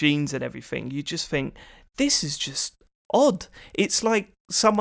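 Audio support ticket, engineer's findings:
Regular ticking at 20 Hz from 2.1 s to end, only with signal. Resampler restarted on every block; 50 ms block edges each carry a small discontinuity.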